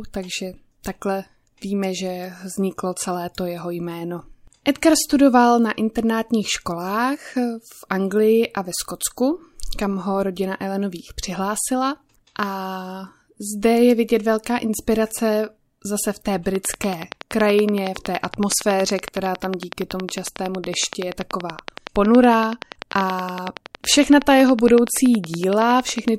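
Something in the chain, likely interference from nearby equipment or a faulty connection, injects a regular train of clicks from 16.55 s to 26.09 s. About a hundred similar pulses arrive at 10.7 per second, standing roughly 15 dB above the speech as a steady ticking that continues through pauses.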